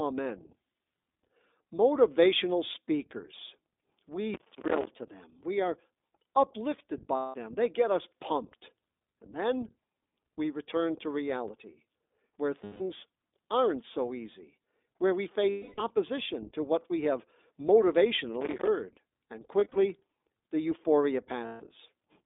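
The whole clip of speech passes through the iLBC codec. Its band runs from about 250 Hz to 3.6 kHz, so a spectrogram shows a hard ceiling near 3.6 kHz with nothing above it and thin lows. Each 20 ms frame's excitation is coded on its own, which fits the 15.2 kbps mode. The result is plainly audible: a rough, slightly synthetic edge on the speech.

From 4.34 to 4.87 s, and again from 18.41 to 18.68 s, there is processor overload crackle. The processor kept missing its deadlines for small buffers, which sounds like buffers of around 5 ms. Dozens of missed buffers in the first burst and a few dozen in the second were each replaced by silence. This produces a gritty tearing over the sound. On a waveform it appears as a comb of tiny hard-edged dropouts. On a spectrogram it appears as thin vertical broadband streaks.

Lost iLBC frames occur at 7.16–7.36 s, 12.64–12.82 s, 15.50–15.82 s and 21.46–21.63 s. 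These gaps are 180, 160, 280 and 140 ms, which fits runs of about seven to fourteen lost 20 ms frames. There is a further lost stretch at 19.60–19.78 s, where about 100 ms of losses are scattered in short runs, the longest around 40 ms. In each gap the decoder repeats the last pitch cycle mixed with noise, giving a held, buzzy, breathy vowel that fades through the longest gap. A spectrogram shows flat, smeared harmonics across each gap. Clear speech resumes at once afterwards.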